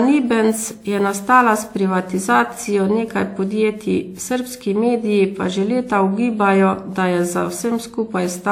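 Throughout the speech there is generation loss: a swirly, hollow smear with blurred consonant attacks and nothing above 17.8 kHz. A single WMA encode at around 96 kbit/s would sound cleaner. The extra damage likely comes from repeated decoding and re-encoding, roughly five passes, each adding quantisation noise.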